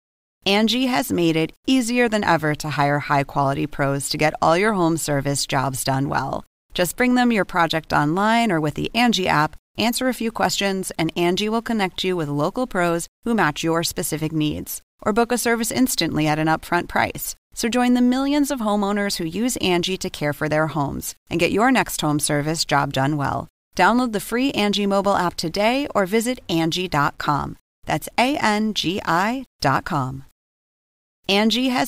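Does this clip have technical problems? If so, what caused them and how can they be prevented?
Yes. Throughout the speech there is grainy distortion that follows the sound, roughest on quiet syllables and decay tails, with the quietest parts sputtering or dropping to silence. The likely cause is low bit depth without dither, truncated to roughly 9 bits, with the error about 40 dB below the signal. Unlike steady hiss, it vanishes in pauses and changes with the sound. Prevent it by keeping a 16- or 24-bit path and applying dither whenever reducing word length.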